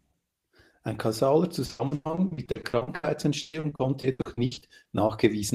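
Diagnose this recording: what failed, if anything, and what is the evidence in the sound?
Network stage: repeated packet loss (robotic sound) from 1.65 to 3.05 s and from 3.41 to 5.11 s. Many short holes, the longest 100 ms and 120 ms, are filled by extending the previous sound, covering roughly half, then a third, of each stretch. The speech comes out choppy, with pieces missing.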